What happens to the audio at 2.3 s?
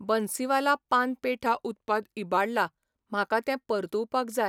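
A drift correction step is under way at 2.3 s, part of a span running from 1.46 to 2.37 s, starting right after "बन्सीवाला पान". The playback rate drops by about 6.2% in one jump, so the speech slows and its pitch falls about 111 cents, slightly more than a semitone, before snapping back at 2.37 s. This is likely clock-matching software abruptly slowing playback to let its buffer refill.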